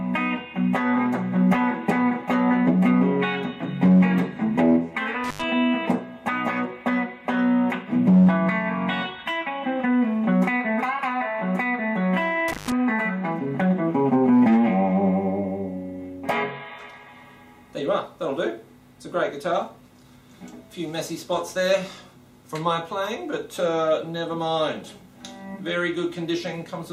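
At 5.24 to 5.44 s and again at 12.48 to 12.72 s, the audio breaks up from an intermittent contact: a loose plug or cable briefly loses connection, leaving the signal open for about 91 ms and then 143 ms. Each gap is bracketed by scratchy crackle as the contact scrapes open and closed, with faint hiss in between. That rough, noisy edging separates it from a clean digital dropout, which falls to silence.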